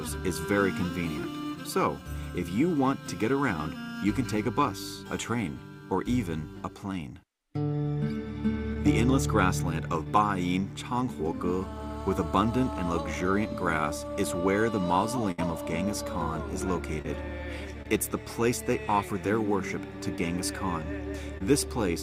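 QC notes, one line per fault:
8.73 s, 10.03 s, 17.02 s, 17.82 s and 21.38 s, short concealed packet loss: each time about 20 ms of audio failed to arrive, and the receiver covered the hole by extending the preceding sound for about 19 to 25 ms before blending back into the real signal. Each event lasts about 40 ms, heard as a brief smear or wobble. Unlike a burst, the patch is too short to audibly fade.
15.31 to 15.40 s, burst of packet loss: about 60 ms went missing in one run. The receiver stretched the last sound across roughly 65 ms, letting it die away as the gap lengthened, so it comes across as a held buzz or fading hiss before the audio resumes. Unlike the short losses, this patch is long enough to hear decay, and the audio picks up further on, with the lost stretch skipped.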